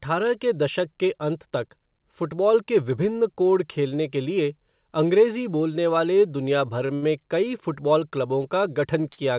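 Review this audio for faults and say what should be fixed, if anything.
Short stalls from late packets occur three times in this speech: at 6.86–6.91 s and 6.95–7.04 s, both just after "बोलने वाले दुनिया भर", and again at 9.12–9.20 s. Each time the jitter buffer ran dry, so the receiver held the last sound for 30 ms, 70 ms and 56 ms respectively, then resumed where it left off. Nothing is lost, but the syllables drag. Deepening the jitter buffer or stabilising network delay would prevent this.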